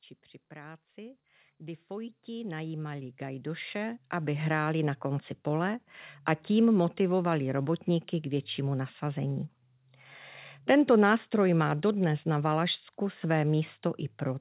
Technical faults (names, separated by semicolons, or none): automatic gain rising